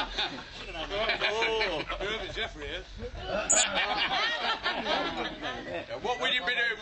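Three brief bursts of damaged data in the compressed stream disrupt the audio, at 1.16–1.22 s, 3.49–3.54 s and 6.27–6.33 s, each lasting roughly 55 ms. At these points the decoder hits corrupted frames, loses sync and hunts for the next valid header, producing a short chirp, squawk, click or hole. On a spectrogram each appears as a narrow vertical disturbance, and the waveform shows an abrupt discontinuity.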